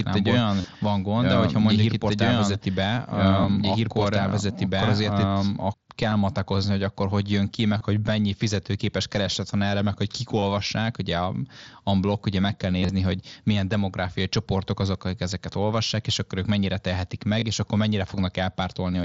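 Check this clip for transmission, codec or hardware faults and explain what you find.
Two faults can be heard in this speech, which comes through a Bluetooth headset link whose mSBC coding limits the band to about 8 kHz: a doubled audio track at the start, and repeated concealed Bluetooth headset packet loss.

Doubled audio track, 0 to 5.74 s: the speech is already playing twice when the clip begins. A second full-band copy runs roughly 2 s behind at about the same loudness, so two overlapping streams compete. The likely cause is the audio being picked up a second time by a slower path, or an edit that kept two offset copies. Unlike an echo or room reflection, the copy doesn't fade, carries no reverberant colouring, and cuts off abruptly at 5.74 s.

Concealed Bluetooth headset packet loss occurs at 0.61 to 0.64 s (30 ms), 3.43 s (7.5 ms), and 6.10 s (15 ms) just before "matakozni hogy akkor hogy". 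It recurs at 7.78 to 7.81 s (22.5 ms), at 10.40 to 10.42 s (22.5 ms) between "erre meg hogy kik" and "ugye a a blog", from 12.80 to 12.89 s, and at 17.40 to 17.42 s (22.5 ms). The 12.80 s event falls between "blog ugye meg kell" and "hogy milyen demográfiai csoportok" and is 60 ms of loss spread over 90 ms, with the longest run 30 ms. Each gap is filled by repeating the best-matching slice of the preceding 20 ms or so, so the gaps aren't silent. The shortest gaps are almost hidden. The longer ones give a short buzzy, steady tone with a slight warble as the real signal resumes, which distinguishes them from plain dropouts or clicks.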